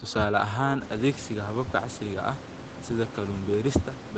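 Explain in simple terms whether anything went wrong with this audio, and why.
Nothing went wrong here: the speech shows the ordinary marks of a phone-style call, with everything above 8 kHz trimmed away by the call's microphone processing and codec, and the room's background noise getting louder from roughly 1 s on while still staying well below the speech.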